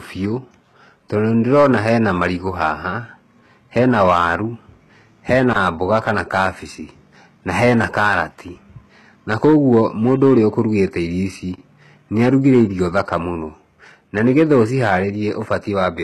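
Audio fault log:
throughout: hard clipping. A stage in the chain was driven about 6 dB past what it could pass, so the loudest moments, around one percent of the signal, had their tops sliced flat instead of following the true waveform. Those flat-topped cycles carry extra harmonics reaching well up the spectrum, and in this speech they are heard as crackle and grit on the stressed, loud syllables, while quieter passages escape it.
throughout: HE-AAC compression. The top of the spectrum is cut away, with nothing above 12.3 kHz, and the upper band that remains sounds synthetic, with plainly audible codec damage. This is likely HE-AAC at a low bitrate, fitting roughly 16 kbps, where only the lower band is truly coded and the treble is regenerated by copying lower bands upward under a coarse envelope. Because those copied harmonics don't line up with the real ones, sibilants come out gritty, metallic or lisping.
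5.53 to 5.56 s and 11.56 to 11.58 s: gap between chunks. The audio was handled in pieces about 6 s long, and each join was left with about 25 ms of silence rather than butting straight onto the next piece. Nothing is removed, but the flow is broken at each join, so the speech drops out in a brief hole, the first one just before "mboga kana", and the regular spacing of the two holes points to the chunk boundaries.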